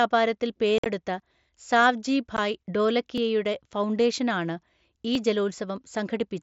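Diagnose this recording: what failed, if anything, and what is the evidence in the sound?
Unconcealed Bluetooth headset packet loss at 0.78–0.86 s and 2.37 s, a fault in the wireless link between headset and phone. In the first event about 67.5 ms of sound drops out in hard-edged holes across 75 ms, the longest lasting 52.5 ms. The second loses 15 ms. Nothing fills the gaps, and the surrounding mSBC wideband sound, up to 8 kHz, carries on either side.

Audio missing between chunks at 1.20 s, 3.18 s (just before "ഫൗണ്ടേഷനാണ് ഈ") and 5.15 s (just after "ഫൗണ്ടേഷനാണ് ഈ"). Each is a roughly 20 ms skip with the two sides butted together, recurring every 2 s. The likely cause is a driver or buffer stage losing a piece at each chunk handover.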